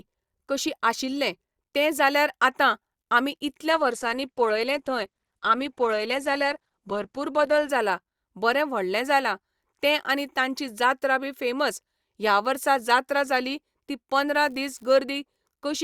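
From 3.70 to 7.70 s, between "आतां आमी" and "जाला बरें व्हडलें जालां", the connection slowed and the adaptive stream switched to a lower bitrate before switching back. The treble is cut sharply, with nothing above 12 kHz, and codec artefacts rise in the speech. This fits Opus dropping from around 64 to 16 kbit/s. Both changes in quality are abrupt, and there is no gap.

From 14.33 to 14.94 s, just after "वर्सा जात्रा जाली ती", an unreliable data bit on one marginal data line flips in a random share of samples. Each flip adds a spike of the same size, so the sound picks up an even crackling fizz. Because the errors come from the hardware path rather than the signal, the fizz doesn't follow the level of the speech and keeps going through any pause within that stretch.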